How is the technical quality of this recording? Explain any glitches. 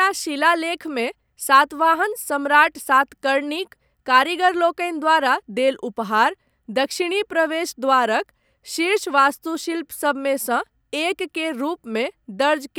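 The technical quality of this recording is good, with no glitches to explain.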